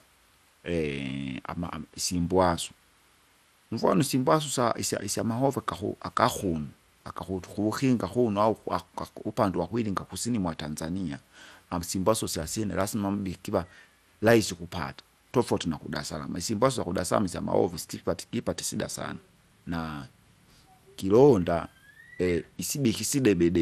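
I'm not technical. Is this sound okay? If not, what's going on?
No. The speech was most likely squeezed with MP2 compression, which gives each slice of the sound only a few bits. Throughout, the top end is missing, so the voice sounds dull, with a grainy, gurgling roughness clinging to it.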